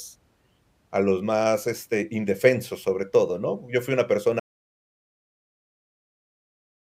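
A speech clip that breaks off with an audio dropout to silence at 4.40 s, right after "fui una", and stays silent to the end. The cut is abrupt, mid-flow, and the gap holds no room tone at all, which likely means the input was lost and silence kept being written. On a waveform the trace collapses to a flat line; on a spectrogram every frequency goes fully dark from that point on.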